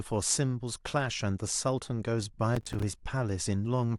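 A speech recording with a burst of processor overload crackle from 2.56 to 2.83 s. For about a quarter of a second, the sound turns gritty and torn. The processor could not deliver each small audio buffer on time. Each missed deadline left a short hole of silence with hard edges. The gaps are spaced in a way that fits buffers of around 5 ms, with roughly fifteen dropped. The crackle stops once the load eases.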